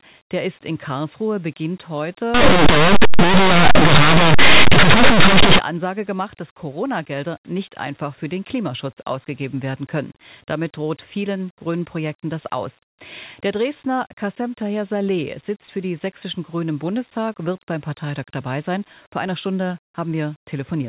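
Speech. From 2.34 to 5.59 s, linear audio read as companded: plain 8-bit samples decoded as mu-law produce very loud, harsh distortion.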